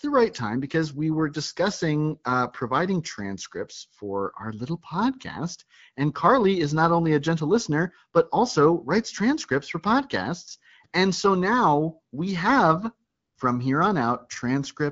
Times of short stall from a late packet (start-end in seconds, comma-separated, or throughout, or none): none